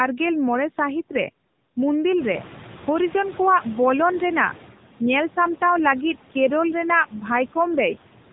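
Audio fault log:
Throughout: noise suppressor artifacts. The steady background is pushed down by about 12 dB, band by band and frame by frame, so it drops away in the gaps between phrases and swells back underneath the speech. This differs from a noise gate, which cuts everything at once: here individual bands come and go.
Throughout: AMR narrowband mobile codec. Nothing reaches above 3.8 kHz, so sibilants are dull and the speech has the boxed-in telephone sound of a narrowband mobile call. The codec damage is plainly audible. Voiced sounds come out buzzy and synthetic, and the remaining background churns into a swirling warble. This points to one of the middle AMR-NB modes, around 8 kbps. A simple low-pass filter would only dull the sound. The buzz and swirl come from the codec rebuilding the speech from a vocal-tract model excited by a few pulses.
2.18–4.66 s: noise suppressor catching up. 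The room noise jumps by about 18 dB around 2 s, and the suppressor's estimate of the noise lags behind the jump. For roughly 2.5 s the louder background comes through with only about 8 dB of reduction, then settles lower as the estimate adapts. The gradual sinking over that span separates this from a real change in the room. A genuine drop in the noise would not trail the rise by a fixed adaptation time.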